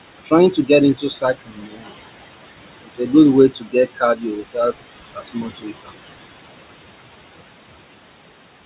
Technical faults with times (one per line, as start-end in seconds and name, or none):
0.00-8.65 noise suppressor artifacts
0.52-0.70 speech cut by the noise suppressor
0.95-1.93 speech cut by the noise suppressor
2.84-3.13 speech cut by the noise suppressor
3.50-4.73 speech cut by the noise suppressor
5.14-5.91 speech cut by the noise suppressor